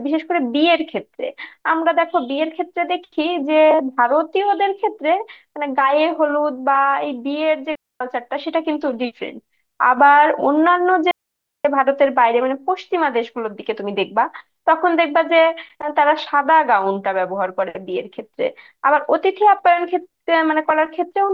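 At 7.75 s the speech just drops out until 8.01 s, about a quarter second of near silence, and it happens again from 11.11 to 11.65 s, this time for roughly 0.54 s. Both are digital wireless dropouts: the receiver lost too much of the incoming data and muted itself with a very quick fade. That's why each gap sounds like a clean hole, with no crackle or burst of noise on either edge.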